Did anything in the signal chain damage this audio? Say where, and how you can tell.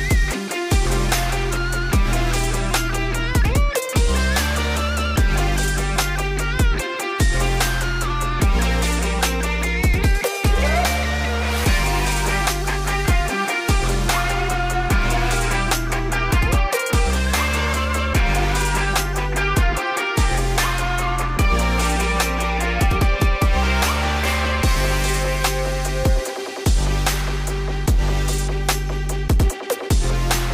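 No, nothing along the chain seems to have left a mark on this one, so there's no stage to point at.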